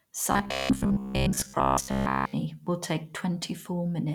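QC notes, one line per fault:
0.32–2.33 s: robotic sound from repeated short buffers, a rigid metallic buzz near 66.7 Hz, likely from most audio being skipped while a 15 ms buffer repeats.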